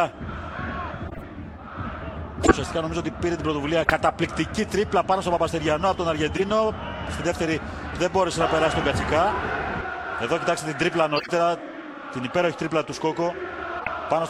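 Corrupt frame decoded at 1.05–1.24, 2.43–2.51, 3.82–3.90, 6.36–6.42, 11.16–11.29 and 13.76–13.88 s. Each time, damaged compressed frames were played anyway, so misread gains and codes put energy at the wrong frequencies for a few frames. The result is a short intrusion of misplaced sound. The one at 2.43 s is the loudest, and the one at 1.05 s the quietest. At 13.76 s about 20 ms of audio is also skipped.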